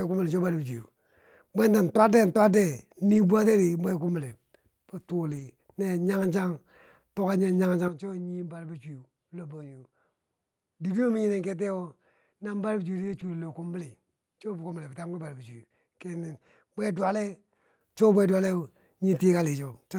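Around 3.05 to 3.19 s, 5.31 to 5.49 s, at 6.23 s, and again at 13.03 to 13.29 s, you get a lost packet rebuilt from error correction. Packets went missing, but the next ones carried low-bitrate backup copies, so the decoder filled the holes instead of leaving gaps. Those stretches sound grainier and noisier for a moment, with the top end sagging a bit. The longest patch, at 13.03 s, fits about seven lost packets.

From 7.88 s to 17.81 s the speech suddenly drops about 10 dB, loses everything above 11.4 kHz, and sits over a new noise floor roughly 55 dB down. There's no silence at the change, just an abrupt shift to a duller, smaller sound. That's likely the input switched to a poorer device, since a second mic would have its own narrower band, level and hiss. The full sound returns at 17.81 s.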